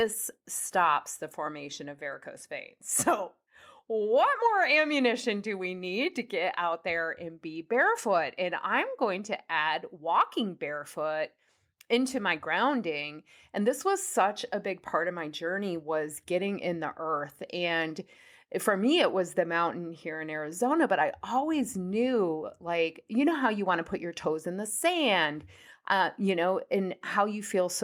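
Nothing stood out as a technical fault on listening to this speech recording.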